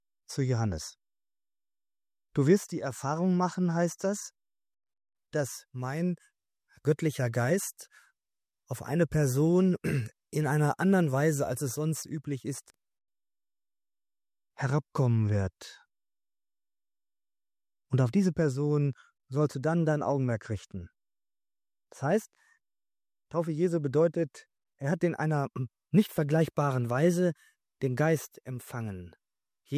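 No technical faults can be heard anywhere in the signal.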